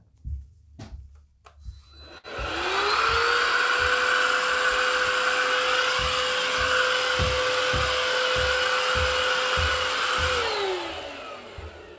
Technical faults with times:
2.18-2.26 short stall from a late packet

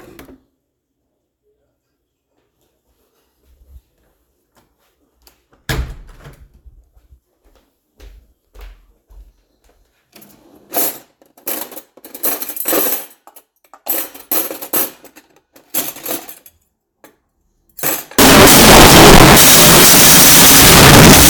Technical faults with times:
18.19-21.29 wrong sample width

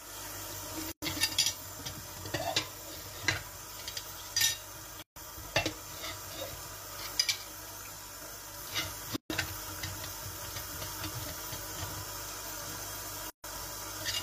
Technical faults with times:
0.92-1.02 gap at a join of encoded pieces
5.02-5.16 gap at a join of encoded pieces
9.16-9.30 gap at a join of encoded pieces
13.30-13.44 gap at a join of encoded pieces

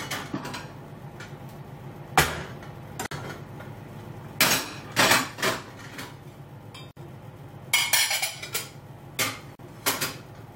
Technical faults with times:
3.06-3.11 gap at a join of encoded pieces
6.91-6.97 gap at a join of encoded pieces
9.55-9.59 gap at a join of encoded pieces

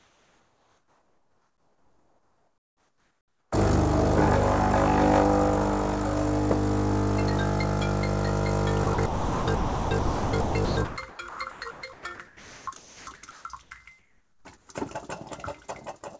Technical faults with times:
0.00-3.52 comfort noise in place of the background
8.84-13.71 sound chopped by the voice detector
13.99-14.69 comfort noise in place of the background

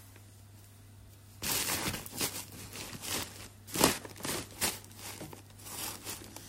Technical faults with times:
none

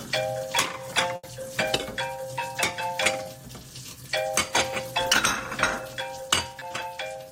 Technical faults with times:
1.15-1.25 burst of packet loss
3.23-3.27 short concealed packet loss
6.59-6.63 short concealed packet loss

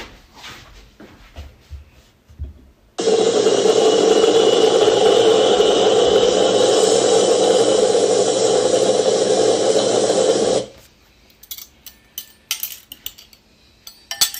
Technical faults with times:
0.00-14.39 hard clipping

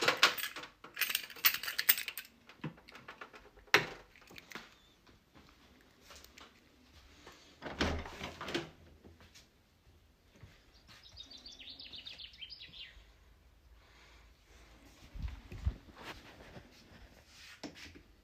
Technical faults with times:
none

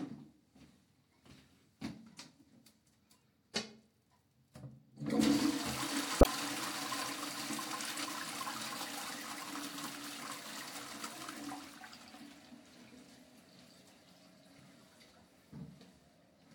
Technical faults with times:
6.18-6.26 damaged data in a compressed stream

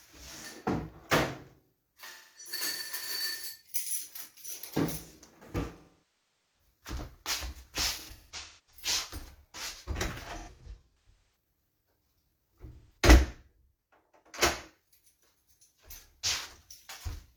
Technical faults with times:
2.04-2.51 AAC frame loss with concealment
5.78-6.59 AAC frame loss with concealment
7.95-8.82 AAC frame loss with concealment
10.25-11.36 AAC frame loss with concealment
12.72-12.97 AAC frame loss with concealment

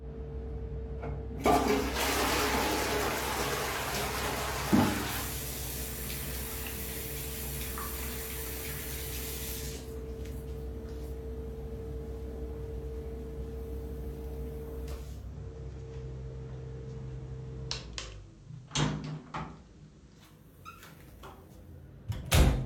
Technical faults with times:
14.94-20.57 digital radio blending to analogue

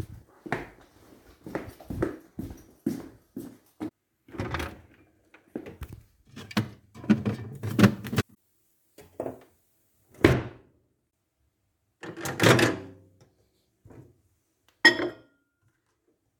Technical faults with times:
7.53-10.33 pre-emphasis left on

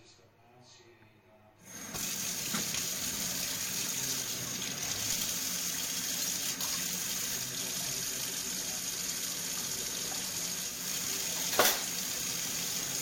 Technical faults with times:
7.35-10.88 digital radio blending to analogue

